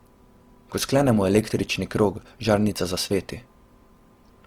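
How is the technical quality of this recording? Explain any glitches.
The quality is held back by audible codec damage across the whole clip: it sounds like likely Opus compression, running in its music-style CELT mode. The bandwidth stays full, reaching up to about 20.2 kHz, so nothing sounds muffled. But the encoder keeps each band's energy while filling in detail with folded or noise-like content, and the speech comes out rough and grainy instead of clean. That level of damage fits a low rate, something around 24 kbps.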